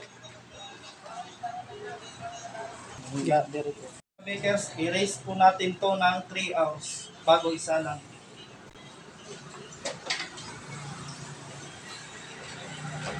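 At 8.67 s an intermittent contact occurs: a loose cable or plug connection briefly separates, breaking the signal path until it reseats at 8.75 s. For about 50 ms of that span the line is fully open, so the sound drops out abruptly rather than fading. Crackle marks both edges of the gap as the contact scrapes open and closed, and faint hiss fills the silence before the audio snaps back in.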